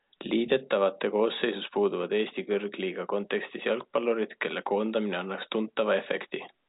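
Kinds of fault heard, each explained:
No fault is audible: the speech sits within telephone bandwidth, with nothing above about 3.8 kHz, as expected of G.711 telephone coding, and the only trace of that coding is a quantisation noise that is at most faint.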